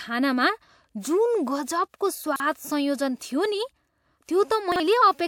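At 1.96 s a pre-echo appears: a short hiss rises for about 46 ms before a sharp attack in the speech, reaching 2.01 s. The codec spread the coding noise meant for the loud onset across its whole block, so it leaks into the quiet moment ahead. Unlike a stray noise burst, this hiss is locked to the attack that follows, and it softens that attack.

Chunks out of order occur from 2.24 to 2.40 s, where a 40 ms piece of audio plays three chunks late, after material it should precede. The same fault recurs from 4.72 to 4.80 s, with a 40 ms chunk one position late. Each produces a brief jumbled stretch with hard joins. Nothing is missing or repeated, which separates it from a dropout or a stutter. The sound is only rearranged.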